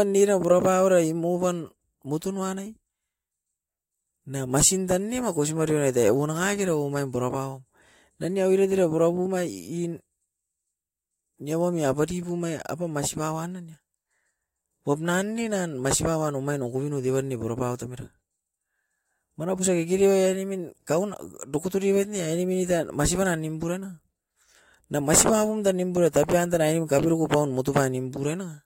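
No technical faults can be heard anywhere in the speech. There is nothing to place on a timeline or describe.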